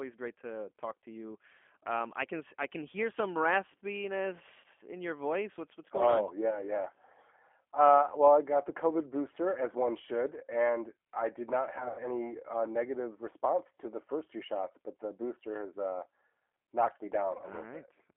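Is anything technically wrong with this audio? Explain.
Yes. There are two faults.

G.729 codec, throughout: The audio is confined to roughly 250 Hz to 3.4 kHz, which fits an 8 kbit/s G.729 coder. It rebuilds each 10 ms frame from a vocal tract filter, a pitch predictor and a few coded pulses, so the speech sounds plainly rough and synthetic, with a thin, muffled top end.

VoIP packet loss concealed by the speech codec, at 4.60–4.66 s, 11.78–12.04 s and 17.37–17.42 s: About 40 ms, 140 ms and 20 ms of audio are missing. The decoder fills each gap by extending its last pitch and filter at falling gain. The second event spreads its losses over 200 ms, with a longest run of 100 ms. There the speech turns into a buzzy tone or a coloured noise that fades, and stays weak or distorted as the decoder recovers frame by frame.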